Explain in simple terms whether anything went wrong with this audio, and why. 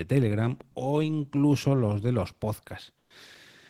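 Between 2.98 and 3.10 s, a stretch of about 120 ms, the real background sound drops out and a smoother, quieter hiss takes its place. This is comfort noise in place of the background. The likely cause is discontinuous transmission: the sending end stopped transmitting during a pause in the speech, and the receiving end filled that gap with synthetic noise roughly matched to the background. The swap shows as a brief change in texture and level.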